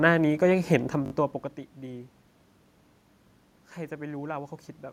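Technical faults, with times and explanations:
1.06 to 1.12 s, repeated buffer: a 20 ms slice of speech plays three extra times with a hard join at each repeat, heard as a brief buzzy stutter. Unlike a dropout, nothing goes silent and almost no audio is lost.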